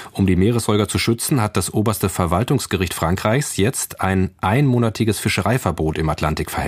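No faults turn up anywhere in this speech recording: no dropouts, no glitches, no level or timing problems.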